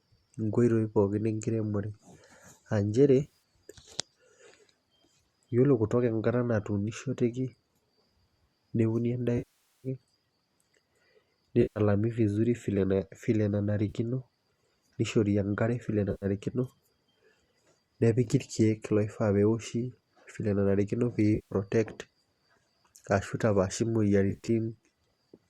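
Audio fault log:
3.23–3.38 s, 9.38–9.88 s, 11.62–11.80 s, 13.89–13.93 s, 16.11–16.25 s, 18.24 s, 21.35–21.54 s, 24.30–24.50 s: AAC frame loss with concealment. The decoder of this low-delay stream, likely AAC-ELD with light coding grain, lost frames and rebuilt them from the last good spectrum. Short gaps of 10 to 160 ms, scattered at 3.23 and 24.30 s, sound like smeared, noisy patches. The 460 ms loss at 9.38 s fades toward silence before the sound returns.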